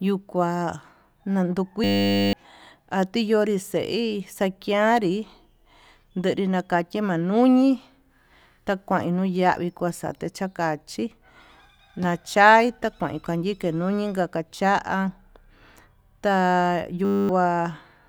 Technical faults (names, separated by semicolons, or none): system hang loop